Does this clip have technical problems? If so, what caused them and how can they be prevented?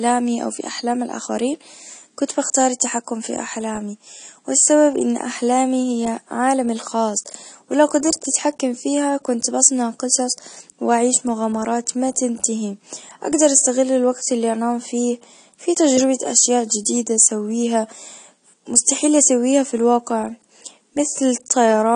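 Yes. Throughout the speech the sound is dull and smeared, with a fizzy, warbling texture on sibilants and sustained sounds, and the top end is cut off. This is likely AAC compression at a low bitrate, plainly audible and consistent with AAC-LC at about 32 kbps. With so few bits, the encoder lowers its cut-off and leaves holes or substitute noise in upper bands. A plain low-pass filter would sound dull but clean, without this fizz. To prevent it, encode at a higher bitrate or keep an uncompressed master.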